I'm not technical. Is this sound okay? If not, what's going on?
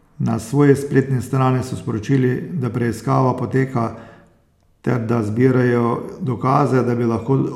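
Yes, this speech recording sounds fine. Nothing in it points to a technical problem that needs fixing.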